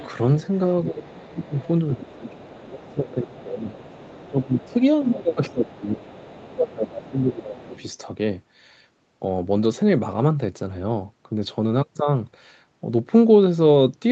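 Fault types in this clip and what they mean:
other side's voice leaking through: A faint second voice sits about 20 to 25 dB under the talker: a brief scrap at the very start, a long stretch from 0.54 to 5.11 s, then 5.78 to 6.72 s and short bits near 7.1 and 7.6 s. Unlike room noise, it is recognisably a separate voice, likely loudspeaker echo the canceller missed.
speech suppressed in double talk: While that other voice is present, the main talker repeatedly sinks by as much as about 20 dB, across 0.9 to 1.54 s and 1.95 to 7.75 s, some 4.7 seconds in all. Unlike packet loss, these are level dips that follow the overlap, likely from the canceller ducking both voices.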